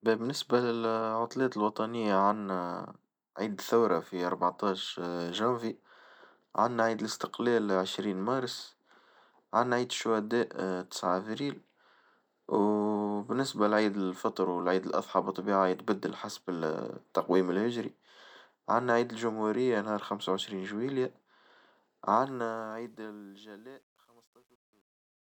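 From 22.10 s to the end at 25.35 s, the speech's closing fade-out turns gritty instead of thinning cleanly, and from 23.01 s onward the grit is at its worst. This is truncation distortion on a fade. The fade stage drops low-order bits without dither, consistent with about a 10-bit path, so as the level sinks the waveform collapses into a few coarse square steps.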